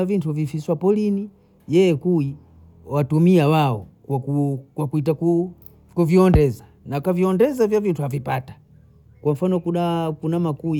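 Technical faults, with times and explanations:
No technical faults are audible anywhere in this speech recording.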